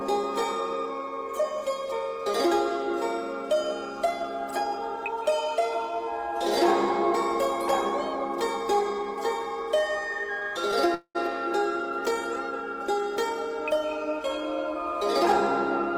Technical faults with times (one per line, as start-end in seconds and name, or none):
10.39-10.43 short stall from a late packet
10.94-11.17 call audio freeze